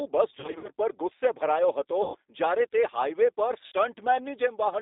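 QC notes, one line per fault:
Throughout: G.729 codec at 8 kbit/s, band about 300 Hz to 3.7 kHz. Speech rebuilt from a filter and few pulses sounds rough and synthetic.
0.40–0.68 s, 2.02–2.17 s, 3.66–3.72 s: VoIP packet loss concealed by the speech codec. The decoder stretches the last sound into fading buzz or noise, then recovers weakly.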